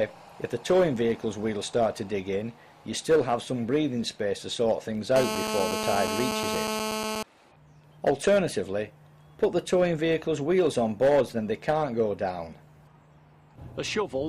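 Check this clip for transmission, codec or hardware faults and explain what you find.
There's one fault here, a GSM phone buzz from 5.16 to 7.23 s. A 2G phone in a call was pulsing its transmitter 217 times a second, and the audio circuitry rectified those bursts. You get a steady, raspy 217 Hz buzz full of harmonics, about 3 dB below the signal and unrelated to it.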